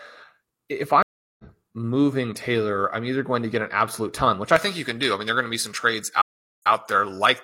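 From 1.03 to 1.44 s a stream reconnect leaves a 361 ms flat gap in the waveform. Sound then fades back in, skipping roughly 0.3 s ahead. After "absolute ton which I", from 4.56 s to the end, pre-emphasis is left on: a J.17 treble boost was never undone. The spectrogram's upper band brightens, with 10 kHz about 11 dB above 1 kHz, and the sound turns thin and sibilant. A second reconnect at 6.22 to 6.71 s silences 399 ms, then resumes 93 ms earlier, briefly repeating material.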